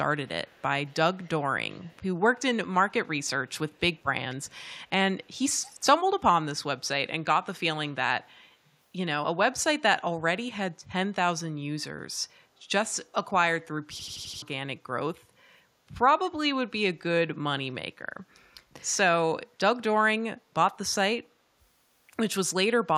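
From 0.27 to 1.28 s, then 1.71 to 2.03 s, 2.34 to 2.39 s, 3.22 to 4.72 s and 5.24 to 5.83 s, a faint second copy of the speech trails the original by 230 ms. This is echo leak, likely from a far-end loudspeaker whose echo canceller let part of the microphone pickup return down the line. The copy sits roughly 25 to 40 dB below the speech. On a spectrogram it appears as a weak ghost of each syllable's harmonics, shifted 230 ms to the right.

From 14.00 to 14.42 s a system hang loop takes over: one 85.33 ms slice of audio repeats exactly five times, a machine-gun stutter at 11.7 Hz. That loop length fits a 4096-sample buffer being replayed while the system stalled, and about 0.4 s of real audio is lost. On the waveform, five identical blocks sit side by side. The spectrogram shows vertical seams at each repeat boundary.

A last short scrap of echo leak, with the same 230 ms delay, shows up at 15.15 to 15.19 s, very faint, roughly 40 dB down.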